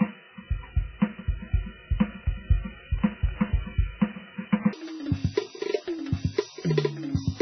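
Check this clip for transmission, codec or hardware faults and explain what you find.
Two problems here: heavy codec damage across the whole music clip, and a stretch near the end that plays back at the wrong speed.

MP3 compression runs throughout. The treble is cut off, so the music sounds dull and boxed-in, with a watery, swirly texture and smeared attacks. That's the encoder running very short of bits. It chops the treble at a fixed point and lets weak frequency lines flicker on and off between frames. The damage is heavy enough that it likely points to an MP3 stream at a very low bitrate, somewhere around 9 kbps.

There's also a section at the wrong speed from 4.73 s to the end. Playback jumps to 1.97 times normal speed, so the music suddenly sounds hurried and shoots up in pitch, very roughly ten semitones. Speed and pitch move together, which is what you get when audio is played against the wrong clock rather than properly time-stretched. 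That's likely an editor or player mismatch on that segment.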